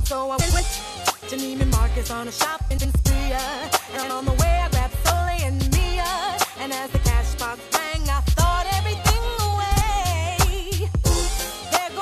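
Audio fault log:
0.40–0.60 s, 2.71–2.85 s, 3.95–4.11 s, 9.71–9.82 s: frames out of order. Two adjacent blocks of about 46–93 ms play swapped, giving a garbled flutter. Unlike a dropout or repeat, nothing is missing or doubled.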